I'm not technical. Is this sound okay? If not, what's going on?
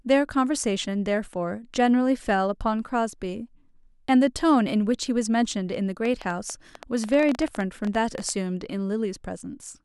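No. From 6.05 to 8.30 s there is a train of clicks: roughly thirty ticks, unevenly spaced at about 10.7 per second, likely from electrical interference or a faulty connection or power supply.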